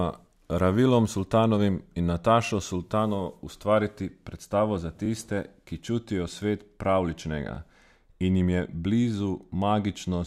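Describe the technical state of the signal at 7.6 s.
A repeated buffer occurs from 7.55 to 7.57 s. One 21 ms block, fitting a 1024-sample buffer, replays once. It sounds like a brief hard-edged stutter.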